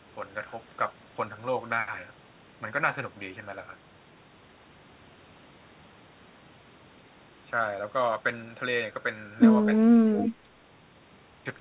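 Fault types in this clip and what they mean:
Speech suppressed in double talk: The speech level dips while the far side is also active, most likely because the echo canceller could not separate the local talker from loudspeaker echo and attenuated both. Between 9.68 and 9.99 s, roughly a fifth of a second is pulled down by as much as about 10 dB. A shallower dip of about 5 dB follows at 10.43 to 10.49 s. On a waveform, the envelope sags abruptly. On a spectrogram, those stretches fade across the band, which stops at 4 kHz.
Echo leak: From 10.13 to 10.3 s, a faint delayed copy of the speech sits about 20 dB below the direct sound, arriving 246 ms later. The likely cause is a loudspeaker-side echo canceller that let part of its microphone pickup through and sent it back. On a spectrogram, this shows as a weak, shifted repeat of the preceding harmonic pattern. On a waveform, it appears as low-level extra energy trailing the original.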